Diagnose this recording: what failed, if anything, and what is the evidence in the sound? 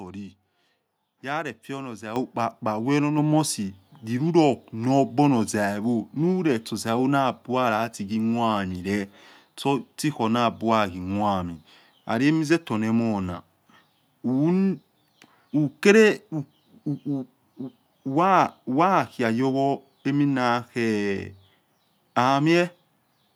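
The microphone volume was stepped up twice, in the call-processing stage, where automatic gain control raised the device's input level. At 2.16 s the level jumps by about 8 dB, and at 3.18 s by about 4 dB more. Each change is instantaneous, and the speech and the background noise floor rise together. That shared, abrupt step separates it from a talker moving closer to the microphone, which would raise the speech but not the background, and gradually.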